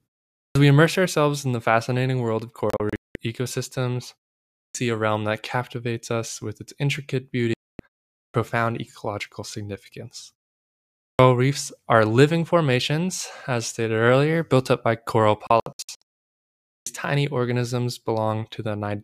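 Speech with two kinds of fault. There is a clipped start after a pause at 0.42, 4.61 (before "a realm that captivates"), 8.2 (before "ecological significance"), 11.05 and 16.71 s. About 130 to 150 ms of each onset is swallowed, as the output device sleeps in silence and wakes late. Digital broadcast dropouts mute the sound from 2.70 to 3.16 s, 7.54 to 7.80 s, and 15.47 to 16.02 s after "built up by coral". There the receiver lost frames and muted, in the first and last dropouts in short scattered holes.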